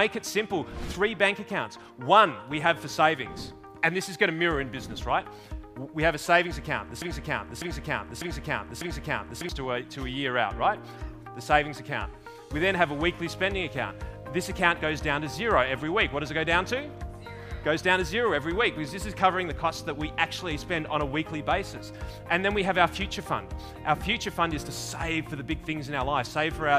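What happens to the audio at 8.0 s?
At 8.0 s the sound is caught in a broken-record loop: from 7.02 to 9.49 s one 0.60 s fragment plays four times back to back, and the audio due in that span is lost. A stalled player or stream likely kept resending its last fragment.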